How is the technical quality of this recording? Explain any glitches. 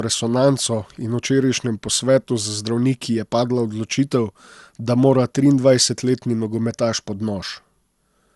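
The recording is degraded throughout by generation loss, with a swirly, hollow, smeared quality across the whole speech clip and nothing above 11.9 kHz. The sound is likely the result of repeated lossy encoding, consistent with about four passes through an MP2-style codec at around 96 kbit/s. Each pass requantises on a shifted frame grid, so noise accumulates and consonant attacks blur. A single encode at that bitrate would not sound this hollow.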